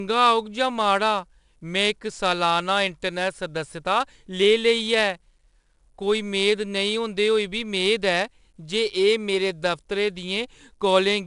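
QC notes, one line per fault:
Throughout: 4-bit ADPCM compression, a gritty hiss that rises and falls with the speech level and stays broadband rather than swirling like a perceptual codec; nothing above 10.7 kHz, and the roughly 89 kbps rate fits a sample rate near 22 kHz.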